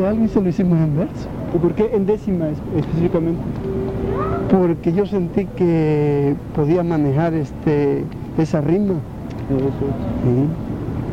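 No technical faults are audible.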